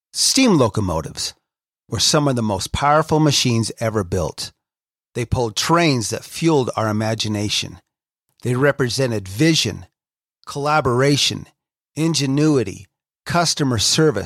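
Nothing in this speech recording stands out as a technical fault, so there's no problem to point to anywhere along the way.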